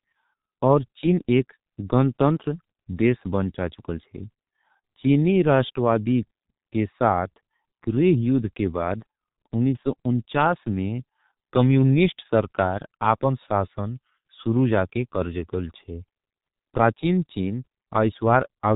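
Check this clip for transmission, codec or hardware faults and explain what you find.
One codec fault runs through the whole clip. The speech has passed through the G.723.1 codec, and the damage is heavy. This narrowband telephony codec works in 30 ms frames and discards everything above 4 kHz. It rebuilds speech from a simple vocal model that updates slowly. Here the result is muffled, hoarse speech with smeared consonants. Sibilants lose their edge. The codec runs at its higher rate, around 6.3 kbit/s.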